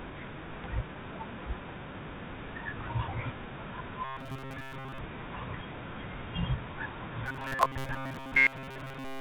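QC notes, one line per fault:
0.64–0.66 s, skip ahead: the speech lurches forward with no pause or fill, as if a chunk were spliced out, and the sounds on either side butt straight together. Around four tenths of a second of audio is missing. Audio that had already queued up was thrown away, in transit or by an overflowing jitter buffer, so playback jumped to later material and the delay shrank by about the same amount.
4.05–4.99 s and 7.26–9.21 s, robotic sound from repeated short buffers: in both stretches the speech turns into a stiff, metallic drone locked at a steady 134 Hz, still loosely tracking the syllables. The likely cause is audio arriving too late, with playback looping the last short buffer, about 7.5 ms long, to fill the gaps. The loop length sets the fixed buzz pitch, and most of the real signal is replaced by these repeats, all over a G.711 A-law path with nothing above 4 kHz.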